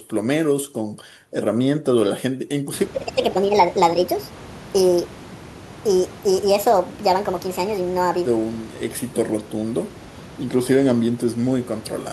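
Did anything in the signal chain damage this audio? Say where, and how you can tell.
Yes. Section at the wrong speed, 2.94 to 8.26 s: speech runs 1.48 times fast and about seven semitones high, likely a playback clock mismatch.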